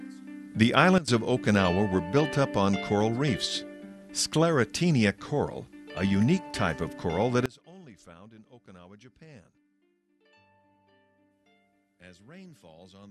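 At 0.98 s and again at 7.46 s, a sudden gain jump drops sound and background together, about 17 dB until 1.08 s, then about 24 dB to the end, likely an unramped gain change.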